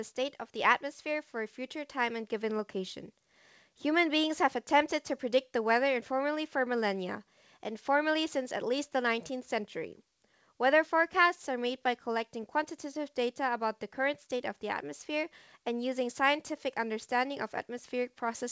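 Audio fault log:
0.16–3.04 s, automatic gain rising: the gain control judged the incoming level too low and pushed its gain up step by step, about 6 dB in all over nearly three seconds. Because the boost is applied to the whole signal, the speech and the room noise beneath it swell together, rather than the speech alone getting louder. The call path's band limit, with nothing above 8 kHz, stays steady throughout this rise.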